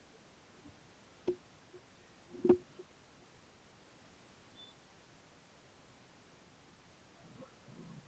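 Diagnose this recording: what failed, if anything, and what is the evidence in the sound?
Nothing failed in this speech recording: the band stopping near 8 kHz fits a normal call path with wideband codec coding, the background is the room's own noise, and the level shifts near 0.5 s and 7 s follow the talker moving relative to the microphone.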